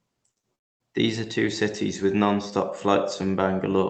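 At 0.31 to 0.38 s and again at 0.40 to 0.45 s there is short concealed packet loss. About 40 ms of audio never arrived each time. The receiver stretched the preceding sound to cover it. Each gap sounds like a brief smear or wobble.

From 0.55 to 0.82 s comes a long network dropout, likely from a stall in delivery. About a quarter second of sound is lost. A fading continuation bridges the hole, then near silence. The speech resumes afterwards, with that part missing.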